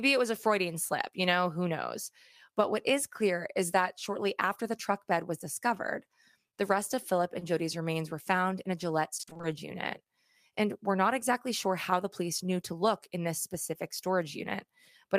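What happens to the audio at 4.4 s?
Nothing goes wrong at 4.4 s; the speech runs on intact through that moment with no audible fault.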